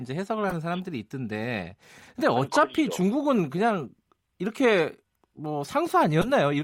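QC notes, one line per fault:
0.49–0.54 s, 2.47 s, 4.78 s and 6.21–6.26 s, corrupt frame decoded: flipped bits in compressed frames were decoded as if valid, so misread gains and codes placed energy at the wrong frequencies for the span of each damaged frame. Each is a short chirp or noise blip cutting across the speech. The first and last cover about two frames each, the middle two a single frame. The last is loudest, near -10 dBFS, and the one at 2.47 s is faint, near -40 dBFS.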